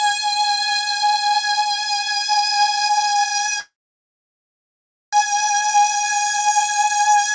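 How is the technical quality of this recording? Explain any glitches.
The recording has one clear glitch: a call audio freeze from 3.60 to 5.15 s. Nothing can be heard above 8 kHz, which fits a G.722 call codec at 64 kbps.

At 3.60 s the sound stops moving forward. A brief fading continuation trails off, then about 1.4 s of silence follows. The likely cause is delayed packets draining the jitter buffer. At 5.15 s the audio resumes where it left off, so a 1.5 s gap is inserted and nothing is lost.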